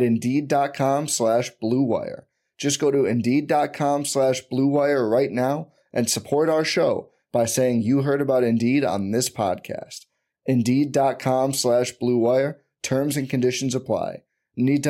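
No technical faults are audible.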